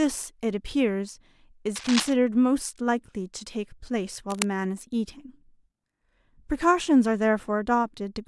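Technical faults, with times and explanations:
1.74–2.13 s and 4.30–4.48 s, cable scratch noise: a worn cable or connector was likely moved, its contact resistance jumping erratically, so dense, uneven bursts of scratchy rustling sit over the speech, only about 5 dB below it, for roughly 0.4 s and 0.2 s.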